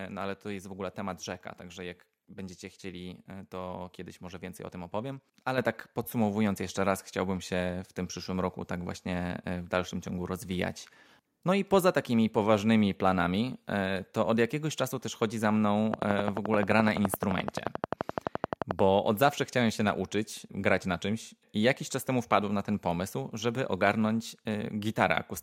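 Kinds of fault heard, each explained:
Microphone volume stepped up: at 5.58 s the input level jumps by about 7 dB in a single step as the call software raises the microphone gain. Speech and background noise rise together and stay at the new, louder level.
Train of clicks: from 15.94 to 18.80 s, around thirty near-identical clicks tick over the speech at a regular 11.6 per second, peaking roughly 20 dB above the signal. This is likely caused by nearby electrical interference or a faulty connection or power supply.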